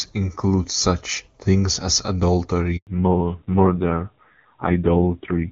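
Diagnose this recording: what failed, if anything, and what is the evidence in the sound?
Network stage, handover gap. The speech cuts out at 2.77 s and stays silent for 100 ms. No frames arrived while the call changed networks.

Codec stage, fallback to narrowband. From 2.87 s, nothing remains above 4 kHz. Clear HD Voice turns dull and rough, fitting a low narrowband rate.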